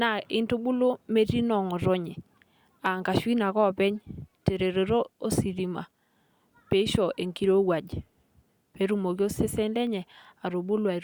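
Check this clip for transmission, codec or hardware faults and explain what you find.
No faults can be heard anywhere in this recording.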